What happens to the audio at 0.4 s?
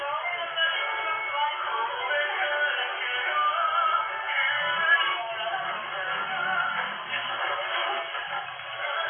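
At 0.4 s, as across the whole clip, the sound is dull and smeared, with a warbling, fizzy texture, likely from heavy AAC compression. Its hard cut-off at 3.4 kHz points to a low bitrate near 16 kbps. On a spectrogram, everything above that line is blank and the spectrum below it is patchy.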